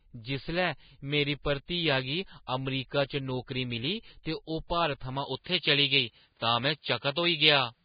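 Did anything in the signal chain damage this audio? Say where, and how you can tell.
Yes. Throughout, the speech sounds heavily hissy and grainy with nothing above 4.9 kHz, likely from low-bitrate Vorbis encoding at the codec stage, consistent with roughly 16 kbps.

From 1.42 to 1.45 s a 23 ms hiss smears ahead of an attack. This is pre-echo: the codec spread quantisation noise across the whole transform block.

At 5.26 s, with no gap, the tone changes and the level shifts by about 5 dB, with new noise roughly 50 dB down. The input was likely switched to a poorer device.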